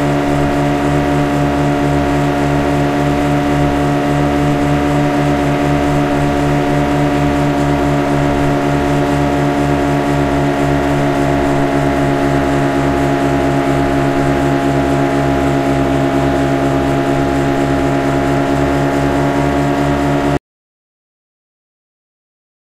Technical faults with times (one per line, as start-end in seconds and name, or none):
20.37-22.63 audio dropout to silence